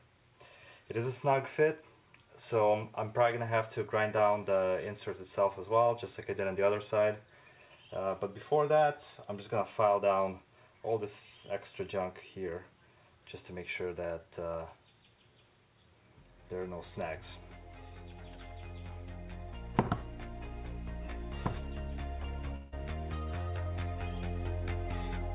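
At 22.56 s the audio breaks up for roughly 0.18 s, until 22.74 s, in a way consistent with a long network dropout being the likely cause. The receiver fills the gap with a synthetic continuation of the last sound, a buzz or hiss that fades across about 160 ms. It never reaches full silence. When normal audio returns at 22.74 s, the missing stretch is simply absent. The concealment keeps the narrow bandwidth of the call path, with nothing above 4 kHz.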